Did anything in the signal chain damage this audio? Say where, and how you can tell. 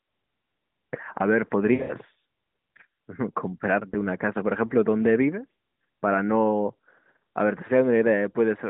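Yes: lost AMR speech frames on the radio link smear and fade the sound from 1.74 to 1.96 s (longest gap 80 ms) and cause a brief dip or warble at 3.90 to 3.94 s. The decoder rejected corrupted frames and repeated the last good parameters at falling gain.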